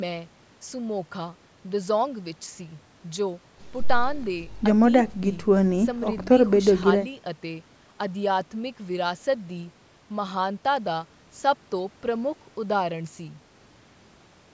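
Nothing technically wrong turns up in this speech recording: it's simply been through a call's usual microphone processing, which trims away the deepest bass and leaves nothing above 8 kHz, and that's just how such a path normally behaves.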